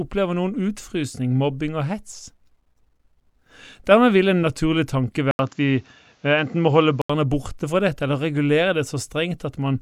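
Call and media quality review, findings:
Input switched to a poorer device, 5.31–7.10 s. Speech turns dull and boxy, nothing above 7.6 kHz, 80 ms silence at switch, new faint noise floor, level roughly unchanged. Capture likely moved to a narrower-band mic or headset profile, then back.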